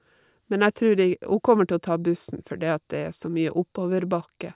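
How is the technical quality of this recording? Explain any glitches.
The recording has no technical glitches to explain: the speech signal holds steady throughout, with no audible break, distortion or other fault.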